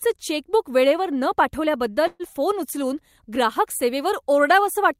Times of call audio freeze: 2.07-2.23

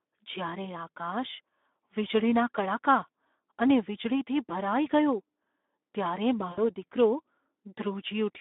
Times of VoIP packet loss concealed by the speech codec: 6.51-6.60

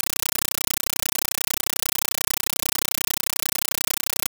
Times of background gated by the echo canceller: none

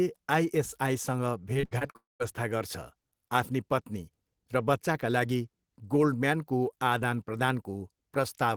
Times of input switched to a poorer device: none

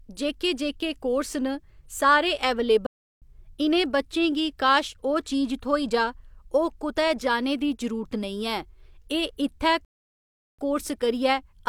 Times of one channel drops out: none

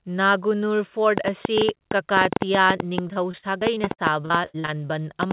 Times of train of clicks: 1.18-5.32

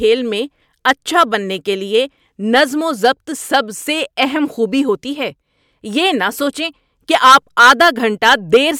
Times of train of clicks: none

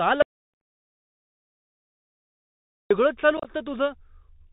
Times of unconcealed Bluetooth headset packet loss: 0.54-0.61, 3.37-3.51

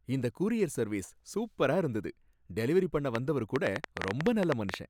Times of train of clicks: 3.15-4.75

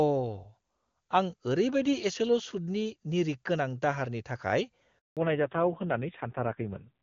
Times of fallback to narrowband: 5.17-7.02

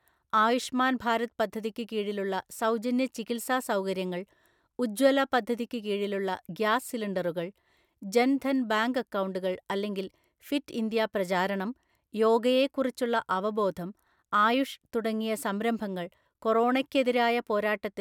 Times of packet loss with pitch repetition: none

